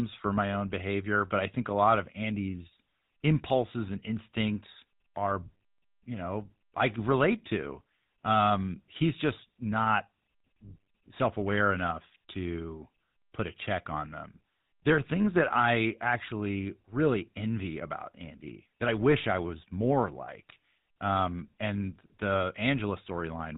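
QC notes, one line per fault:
Throughout, GSM full-rate codec: the speech has a plainly audible buzzy, gravelly roughness and nothing above 4 kHz, so it sounds dull and telephone-like. The codec reduces each frame to a vocal-tract filter and a sparse train of regularly spaced excitation pulses, keeping only every third excitation sample. The decoder rebuilds the voice from that coarse pulse pattern, and the result is the grainy buzz. The damage level fits a 13 kbps stream.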